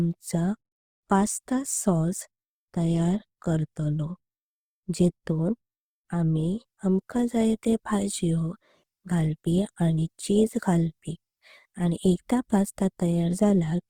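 From start to finish, the speech carries plainly audible Opus compression damage. The likely cause is the Opus codec running in its music-oriented CELT mode at a very low rate, with a bit budget that fits something around 16 kbps. The full bandwidth is kept, but there are too few bits for the fine detail in each band. The encoder fills the gaps with folded copies of lower bands or with noise, so the speech sounds rough and grainy rather than swirly.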